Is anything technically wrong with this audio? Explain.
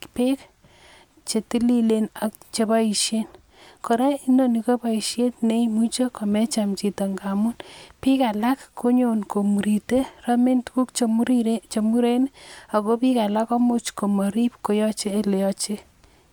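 No, there are no faults.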